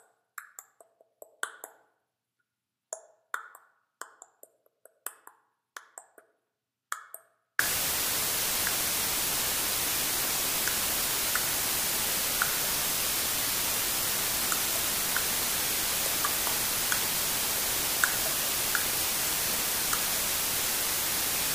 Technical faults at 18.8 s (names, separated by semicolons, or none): low bit depth with dither